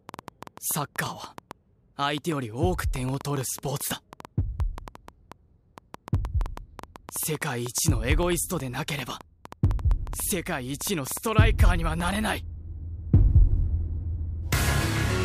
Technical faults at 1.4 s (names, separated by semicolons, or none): train of clicks